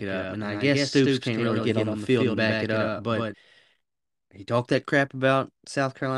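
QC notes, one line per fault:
0.00–3.34 s, doubled audio track: likely a second, slower capture path or an edit leaving two copies of the audio mixed out of step. A dry, full-band copy trails roughly a tenth of a second behind at about 5 dB below, already present at the start and cutting off abruptly.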